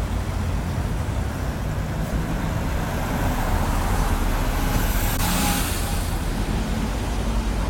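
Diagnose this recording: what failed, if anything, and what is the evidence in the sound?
The codec stage is where this one went wrong. Compressed frames were skipped at 5.16 to 5.20 s. The sound jumps forward by about a tenth of a second at the join. That's what you get when whole frames never reach the output, either missing from the file or rejected by the decoder as damaged. The jump comes in whole frame lengths.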